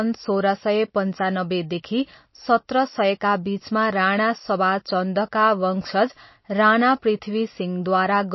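Throughout, the speech sounds watery and swirly with nothing above 5.8 kHz, likely MP3 compression starved of bits, fitting a bitrate near 26 kbps.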